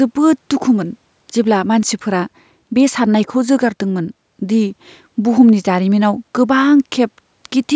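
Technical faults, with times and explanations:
No technical faults are present.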